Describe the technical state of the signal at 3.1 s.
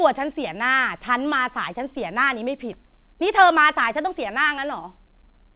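At 3.1 s the audio is intact, with no dropout, glitch or distortion, and only the narrow telephone-band sound of the call path, which carries nothing above 4 kHz, consistent with G.711 A-law coding.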